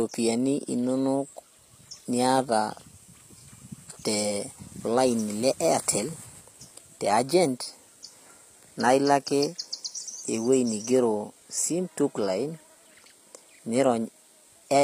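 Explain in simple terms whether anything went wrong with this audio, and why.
Yes, something went wrong. The speech was likely squeezed through HE-AAC compression, a space-saving method that stores only the lower part of the sound properly and then fakes the treble by copying lower pitches upward. Because that top end is a rough imitation, it doesn't match the real voice, so s sounds come out gritty, metallic or lispy. Nothing at all survives above about 15.5 kHz, and the damage is plainly audible from start to finish.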